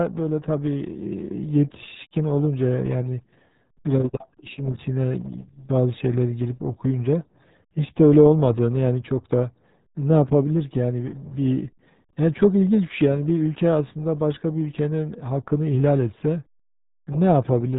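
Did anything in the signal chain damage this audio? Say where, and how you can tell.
Yes. The damage comes from the codec stage and lasts the whole clip. The speech sounds muffled and gargly, with nothing above 3.8 kHz. That is the RealAudio 14.4 codec. Its heavy smearing fits a dial-up rate of about 8 kbit/s.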